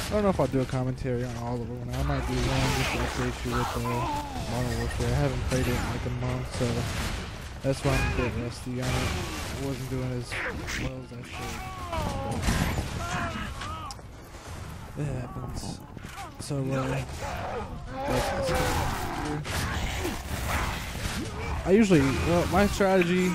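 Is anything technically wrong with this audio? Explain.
Yes. There are two sudden gain jumps. At 4.21 s the level drops by about 6 dB until 4.36 s. At 10.88 s it drops by about 9 dB until 11.93 s. The background noise falls with the sound each time. The likely cause is a gain change applied between two samples with no ramp.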